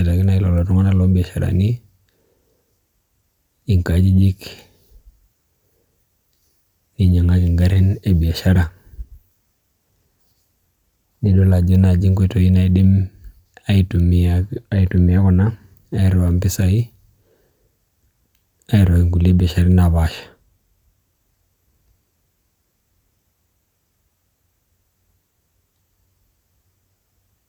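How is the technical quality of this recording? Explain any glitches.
No glitches or technical faults can be heard anywhere.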